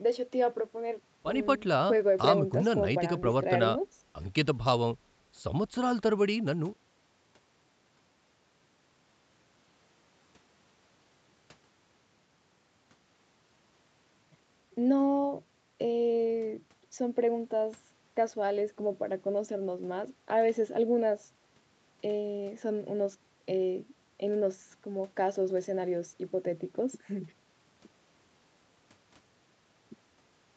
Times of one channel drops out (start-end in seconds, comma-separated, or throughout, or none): none